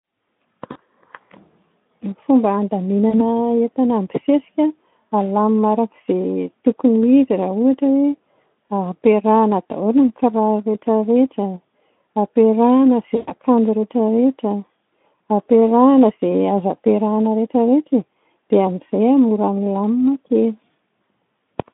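At 0.71–0.77 s, 3.09–3.22 s and 13.15–13.32 s, VoIP packet loss concealed by the speech codec extrapolates the last pitch and filter with falling gain. Speech smears into a fading buzzy tone or coloured noise. On a spectrogram, harmonics stretch flat and dim, with the longest gap, about 120 ms, at 13.15 s.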